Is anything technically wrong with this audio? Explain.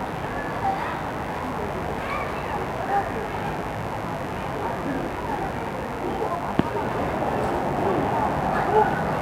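Yes. For the whole clip, a mains buzz runs underneath the sound. Sharp switching spikes from the 50 Hz supply, of the kind a dimmer, a rectifier or an unshielded line lets in, are entering the signal path twice per mains cycle, so they repeat 100 times a second. Their harmonics stretch from 50 Hz up into the several-kHz range, which makes a steady, raspy buzz rather than a smooth hum, sitting roughly 15 dB below the wanted sound.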